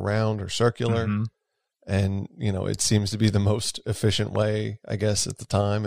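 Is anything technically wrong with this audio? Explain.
Yes. A loud pop occurs from 4.36 to 4.38 s, just after "be the most efficient". A sudden voltage pulse, likely from a plug, switch, static or driver glitch, was added to the signal, giving one sharp pop about 10 dB above the speech, which carries on underneath.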